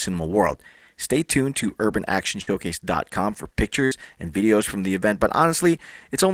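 Burst of packet loss in this speech at 2.41–2.50 s and 3.85–3.94 s: the receiver stretches the last sound for about 60 ms, fading it, then resumes with roughly 60 ms missing.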